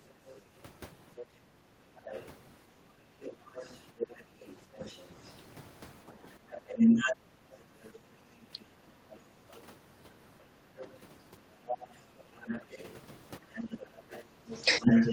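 Right from the start and through the whole clip, a second voice sits only a few decibels under the talker. That's the other side's voice leaking through, likely loudspeaker echo the canceller never fully removed. From 1.7 to 3.23 s the talker dips by up to around 15 dB, and again from 4.78 to 9.03 s and from 10.65 s to the end by around 10 dB. That's speech suppressed in double talk, likely the canceller ducking everything while both sides spoke. At 9.31 to 9.37 s the room background drops by about 8 dB for a moment, background gated by the echo canceller clamping the microphone.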